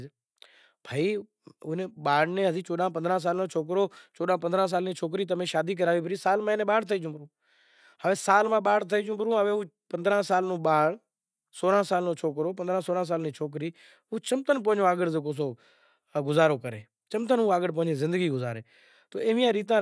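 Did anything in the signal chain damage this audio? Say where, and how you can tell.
No, nothing along the chain from capture to playback left any mark I can hear on this speech.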